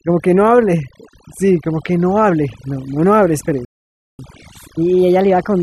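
Throughout, the speech sits over a near-silent background flecked with twinkling specks: overdone noise removal has cut frequency bands close to its noise estimate, taking quiet parts of the voice too. At 3.65 s the audio drops out for about 0.54 s until 4.19 s, a playback stall, likely from the player running out of data or being blocked. From 4.19 s to the end, the speech runs 1.15 times fast and about two semitones high, as catch-up at higher speed resamples the backlog to recover lost time.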